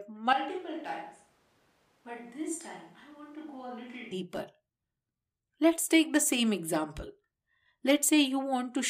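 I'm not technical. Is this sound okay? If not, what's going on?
No. From 0.33 to 4.11 seconds the speech turns hollow, distant and quieter. That is a switch to a distant microphone, likely from the close one failing.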